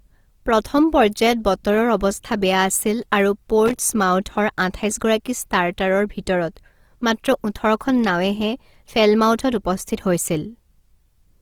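Throughout, the speech carries plainly audible grainy, rough texture, likely from Opus compression in its CELT music mode at a rate fitting about 24 kbps; a spectrogram shows noise-filled bands reaching about 20.2 kHz. From 3.66 to 3.78 s, loose connector crackle chops the signal as a worn contact makes and breaks, giving an irregular burst of scratching, with the waveform broken into ragged fragments.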